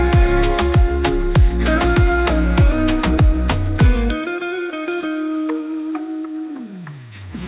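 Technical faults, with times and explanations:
No technical faults detected.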